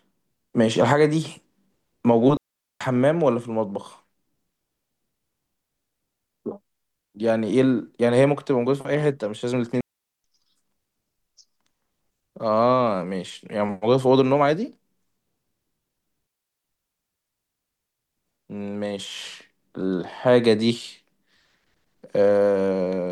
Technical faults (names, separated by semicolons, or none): digital wireless dropout